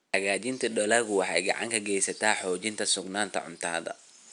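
There are no technical faults to describe in time order in this speech clip, with only faint room noise sitting about 48 dB below the speech.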